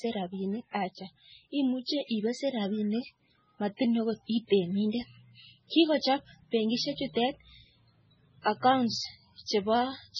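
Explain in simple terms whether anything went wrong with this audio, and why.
MP3 compression, heavy, runs through the whole recording from start to finish. The speech sounds dull and watery, with nothing at all above about 8.7 kHz, so s sounds lose their crispness and take on a swirly, metallic edge. The likely cause is squeezing the file down to a very small size: the encoder throws away the treble entirely and drops quieter details, which flicker in and out from moment to moment and blur sharp sounds.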